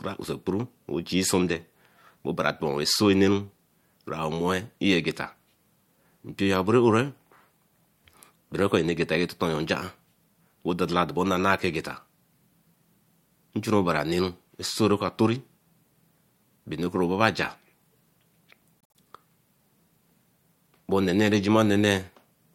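Repeated frames cause a stutter in this speech recording from 18.81 to 18.95 s. A 72 ms block of audio plays twice more straight after its first pass, so the same sliver of sound is heard three times in a row. That length fits a short run of compressed frames that were written or sent more than once, and the decoder played each copy in turn. The two extra plays stretch the audio by 144 ms.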